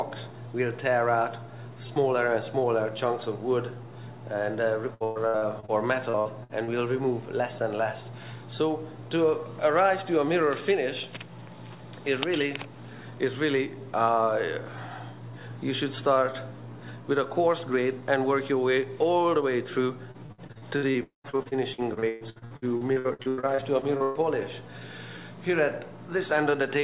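From 4.94 to 5.71 s and again from 6.10 to 6.70 s, the sound turns choppy and robotic, with short holes bridged by stretched copies of what came just before. This is repeated packet loss: the longest gap is about 0.12 s, and the receiver fills each one by continuing the last audio. Concealment covers nearly half of the first span and about a third of the second.

The same choppy, robotic texture returns across 20.11 to 24.18 s, with dozens of brief gaps up to about 0.12 s each, about a third of the stretch patched over.

Inside that run, from 21.03 to 21.27 s, the patched sound fades into roughly 0.13 s of silence before the audio resumes further on, with the missing portion gone. This is likely a long network dropout, where the concealment ran out and the lost part was never played.

Throughout, nothing is heard above 4 kHz, which fits a G.711 mu-law call codec at 64 kbps.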